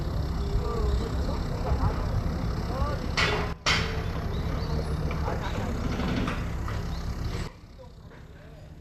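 At 3.53 s the level drops by about 16 dB for 0.13 s, then snaps back; from 7.48 s to the end it drops again. Sound and noise floor fall together in a sudden gain jump, likely an unramped gain change, appearing as abrupt vertical steps in the waveform envelope and spectrogram.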